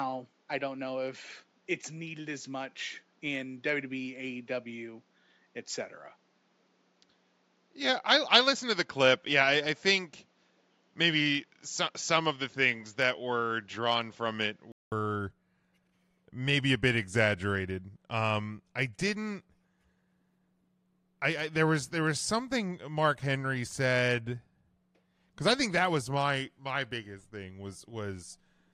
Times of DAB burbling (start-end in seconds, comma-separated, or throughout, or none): none